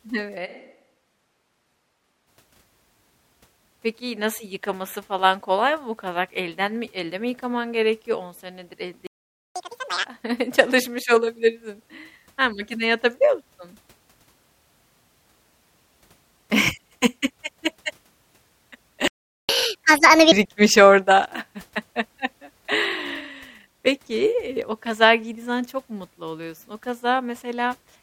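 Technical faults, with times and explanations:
0.47–2.26 s, switch to a distant microphone: the speech turns roomy and hollow and thins in the low end, dropping about 5 dB, while room noise rises to about 25 dB below the speech. The change in and out is abrupt. This likely comes from the close microphone dropping out and a farther pickup carrying the signal, so more reflected sound and ambience reach the capsule relative to the direct voice.
9.07–9.56 s, playback stall: right after "senedir elde" the audio cuts to silence for about 490 ms, then resumes. The likely cause is the player's buffer running dry or its audio thread being blocked, leaving nothing to output until data arrives again.
9.56–10.05 s, catch-up at higher speed: the backlog plays at 2x speed, with pitch raised roughly ten semitones, until normal rate returns at "çalışmış olabilirsin". The player resamples the queued audio faster to recover the time lost in the stall, so tempo and pitch rise together.
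19.08–19.49 s, playback stall: a second gap of about 410 ms of silence interrupts the speech mid-flow. The likely cause is again buffer underrun or a blocked playback thread.
19.49–20.32 s, catch-up at higher speed: playback runs at 1.5x with pitch up roughly seven semitones, then settles back. This is the same resampling catch-up as the first one, applied more gently over a longer span.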